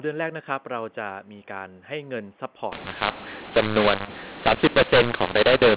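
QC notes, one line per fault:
2.72 s to end, mu-law and A-law mixed up: the mu-law telephone speech is decoded as A-law, scrambling levels so it turns harsh and distorted while the pauses fill with noise. The waveform shows uneven amplitudes and a raised floor, and the spectrogram shows broadband noise below 4 kHz.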